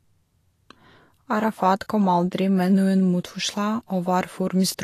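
Throughout the speech, the treble sounds hissy and grainy, with roughened tones and smeared consonant attacks, the likely result of low-bitrate Vorbis compression near 35 kbps. Fine high-frequency detail has been replaced by coarse noise; a spectrogram would show a lowered cut-off and speckled, mottled energy below it.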